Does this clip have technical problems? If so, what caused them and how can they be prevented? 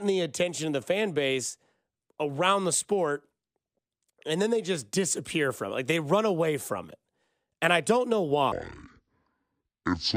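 Yes. A section at the wrong speed runs from 8.52 s to 10.17 s, the end of the clip. The speech there plays at about 0.55 times its recorded speed, so it drags and drops in pitch by roughly ten semitones at once. The likely cause is playback or editing locked to the wrong clock, stretching that stretch without pitch correction. Prevention: confirm every segment's sample rate and speed setting match the project before rendering.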